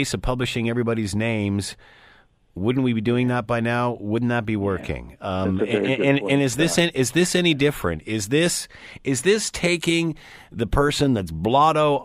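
Nothing in the recording trips up the ear, as the speech just runs along without any glitch, dropout or hiccup worth flagging.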